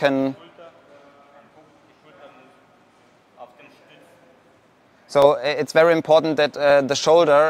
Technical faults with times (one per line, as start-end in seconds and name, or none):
0.79-6.70 clock drift buffer slips